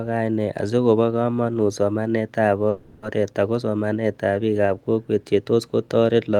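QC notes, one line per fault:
2.69–3.04 s, call audio freeze: packets were likely held up in transit and the jitter buffer ran empty, so the receiver stretched the last sound into a fading buzz or hiss for 330 ms. The speech then resumes where it stopped with nothing lost, but 330 ms later.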